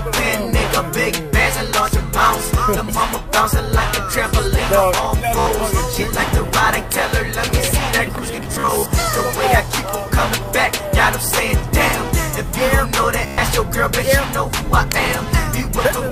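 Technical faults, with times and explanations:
1.43 to 1.46 s: Bluetooth stutter. About 29 ms of audio is missing, so the receiver repeats its last short slice as a brief stammer before the sound resumes further on.
5.39 to 5.46 s: Bluetooth stutter. About 73 ms is lost, long enough that the repeated slice becomes a short buzz.
8.36 to 8.86 s: Bluetooth stutter. About 218 ms drops out in scattered gaps across half a second, the longest 44 ms, giving an intermittent machine-gun rattle.
13.26 to 13.38 s: Bluetooth stutter. About 116 ms is lost, heard as a sustained buzz.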